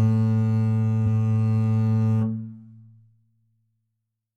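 At 1.03 s the music jumps forward by roughly 300 ms: compressed frames skipped, meaning the decoder lost or rejected whole frames. Unlike a dropout there is no silence. The jump fits several frames of about 46 ms.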